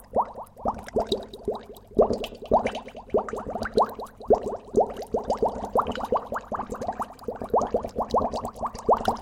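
Two devices in the chain are most likely running on unsynchronised clocks that differ by around 100 ppm, so a single sample is dropped or repeated each time the drift adds up to a whole sample. These clock slip clicks run from 0.24 s to 9.09 s, about five times a second and some forty in all. They come through as faint, evenly spaced ticks, clearest on the louder, sustained parts of the sound.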